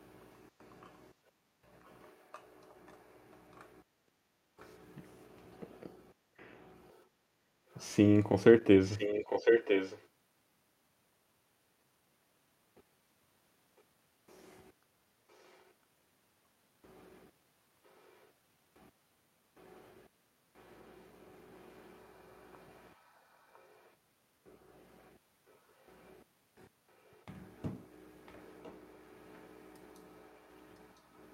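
There's an echo leak running through this one: a delayed copy of the speech, about 1 s behind, shows up at 1.85, 4.59, 6.89 to 10.06, 15.31, 17.98, 20.63, 23.53 and 27.12 to 29.56 s. Most are faint, barely-there scraps, but the long stretch from 6.89 s comes back nearly as loud as the original, and the one from 27.12 s is much quieter, about 30 dB below the speech. Likely a far-end speakerphone whose echo canceller let the pickup through.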